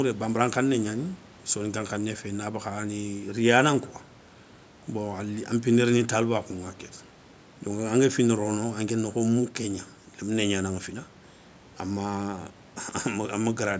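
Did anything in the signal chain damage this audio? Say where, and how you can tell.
No, nothing in the chain damaged it.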